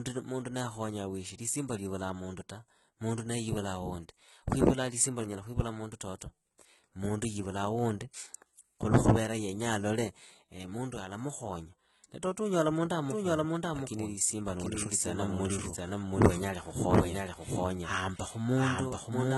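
The clip is speech. The treble is heavily damaged and stops at 11.8 kHz, with gritty, metallic sibilants. This points to HE-AAC compression at a low rate, likely around 16 kbps. At 1.38 s, after "naakhonyaa weshe" and before "lisimba liivulaa mundu ta", there is pre-echo. A 10 ms hiss smears ahead of a sharp attack. From 13.1 s, after "na toto unyola mundu", there is a doubled audio track to the end. A second copy, about as loud, follows roughly 0.7 s behind and starts abruptly. The cause is likely a second capture path or an edit out of step.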